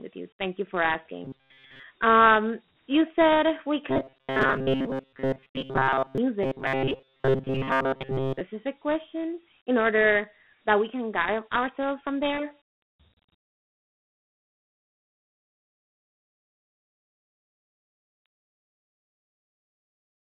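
Dialogic VOX ADPCM runs through the whole speech clip: the sound is confined to a telephone band of roughly 150 Hz to 3.5 kHz, with nothing at all above 4 kHz, and a gritty hiss trails the speech throughout. The 4-bit adaptive coding at 32 kbps, which fits 8,000 samples a second, leaves plainly audible quantisation grain because each sample is stored as a coarse step from a running prediction. Robotic sound from repeated short buffers appears from 1.25 to 1.84 s, 3.90 to 6.18 s and 6.43 to 8.41 s. In those spans the speech becomes a rigid, metallic buzz locked at 133 Hz that only loosely tracks the speech. A slice of about 7.5 ms is being looped, with most of the real audio skipped and replaced by copies, likely because new audio reached the playback buffer too seldom.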